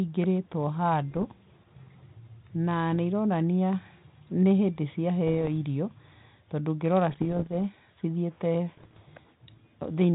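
Bit errors on an ADPCM link hit this speech at 1.11–1.28, 2.92–2.96, 5.26–5.49, 7.10–7.54 and 8.74–9.03 s. Each flipped bit knocks the decoder's step size and predictor off course, leaving pops and rough bursts with brief level jumps. The waveform shows spiky excursions, and the spectrogram shows broadband vertical smears.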